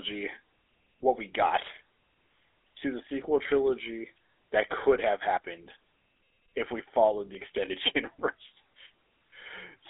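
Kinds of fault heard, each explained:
GSM full-rate codec: the whole clip goes through the old GSM full-rate speech codec, around 13 kbps, with a telephone-style band of roughly 300 Hz to 3.6 kHz and nothing above 3.8 kHz. The voice gets that buzzy, gravelly edge from the coarse pulse excitation, and it's plainly audible.
Audio missing between chunks: there's a single skip at 5.37 s where a short piece, something like 30 ms, just vanishes and the two sides butt together with no gap. It likely comes from processing in 2-second chunks and dropping a bit at the joins.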